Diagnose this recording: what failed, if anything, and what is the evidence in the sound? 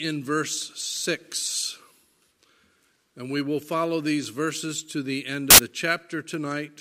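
The fault sits in sample-format conversion: samples built from the wrong bytes, from 5.50 to 5.58 s. For about 80 ms the sound gives way to loud, harsh broadband noise. The reader has misassembled each sample's bytes, so the rapidly changing low-order bits land in the significant positions. On a waveform the burst appears as a dense block; on a spectrogram, as a flat broadband band spanning all frequencies.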